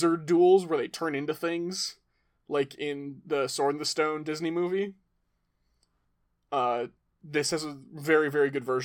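No technical faults are audible.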